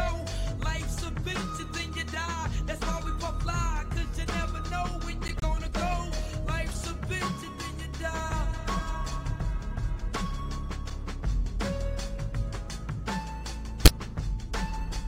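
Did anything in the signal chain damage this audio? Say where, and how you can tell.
Yes, at the codec stage: corrupt frames were decoded. Flipped bits inside compressed frames reached the decoder, which played them anyway. Misread gains and codes put energy at the wrong frequencies. From 5.28 to 5.44 s there is a stretch of foreign energy that points to several consecutive damaged frames, peaking around -15 dBFS. At 13.85 to 13.89 s a shorter, louder error of about one frame's length peaks near -10 dBFS.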